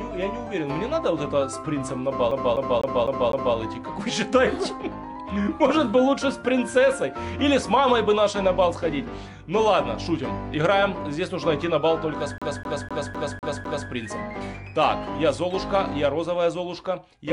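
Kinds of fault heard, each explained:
CD stuck on one turn: a fast, even stutter, the same 0.25 s of sound repeating with a brief mute at each jump, five times from 2.31 s and six from 12.38 s, as a scratch throws the laser back one track every revolution.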